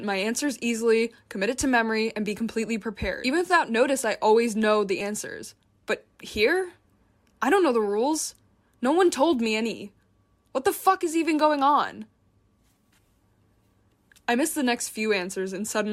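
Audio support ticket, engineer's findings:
Compressed frames skipped at 5.00–5.02 s, right after "I always know the". Audio jumps ahead roughly 30 ms, about three 10 ms frames lost in decode or file. Waveform shows an abrupt envelope shift. Spectrogram shows a thin vertical discontinuity, harmonics misaligned.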